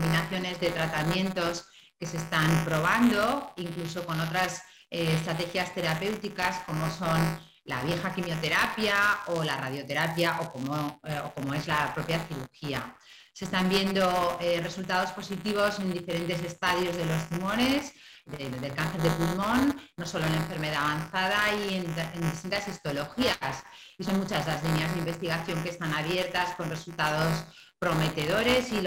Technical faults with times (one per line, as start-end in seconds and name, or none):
0.00-28.86 buffer tearing